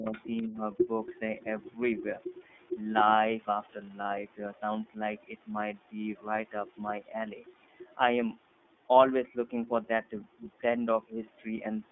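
Speech runs through an iLBC codec for its whole length, confined to a line band of about 200 Hz to 3.6 kHz, so nothing carries the upper consonant detail. The codec damage is plainly audible: a rough, slightly synthetic texture that fits 30 ms frames at about 13.3 kbps. What sets it apart from simple band-limiting is that each frame's excitation is coded on its own, so the grain shifts frame to frame instead of merely sounding muffled. In the opening moments the speech is dipped by roughly 15 dB, once from 0.00 to 0.12 s and again from 0.47 to 0.57 s, with about 70 ms and 100 ms of the sound pulled down. Both dips most likely come from speech suppressed in double talk, an echo canceller turning down everything while it cannot tell the talker from the loudspeaker. That differs from a dropout or packet loss, which leaves silence or a concealment buzz rather than a level dip tracking the competing voice. 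Between 0.06 and 0.43 s a second, fainter voice sits some 20 dB under the main speech, the other side's voice leaking through, likely from loudspeaker echo the canceller did not fully remove. Unlike room reverberation, it is a distinct second talker, not a smeared tail of the main one.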